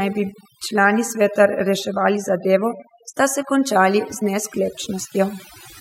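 From start to finish, this speech has overdone noise removal. The reduction was pushed so hard that any frequency band near the noise estimate gets pulled way down, quiet parts of the voice included. You're left with a near-silent background full of twinkly specks.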